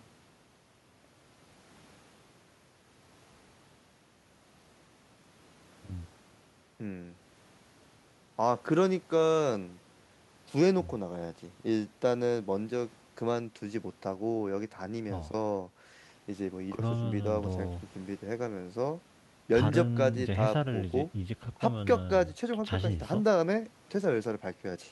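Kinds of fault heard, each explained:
No audible faults turn up anywhere in this recording.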